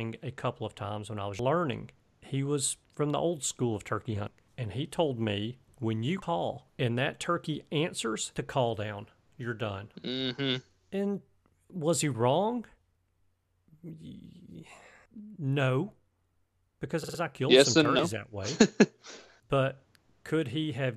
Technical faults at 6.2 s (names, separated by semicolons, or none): dropped buffer (overrun)